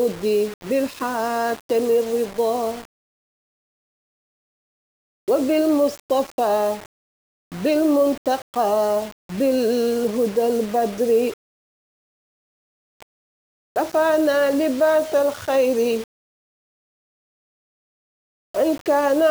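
Grainy distortion follows the sound throughout, quiet parts sputtering out; likely low bit depth without dither, fitting 5-bit rounding. Coarse waveform steps, signal-following spectrogram haze.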